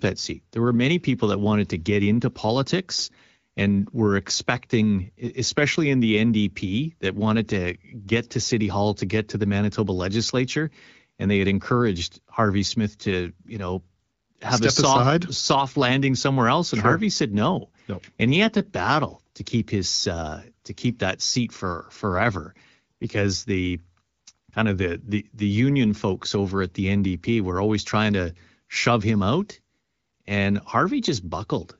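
No faults are audible; the speech carries the slightly band-limited, lightly coded character of an AMR wideband (HD Voice) path running at a mid-to-high rate.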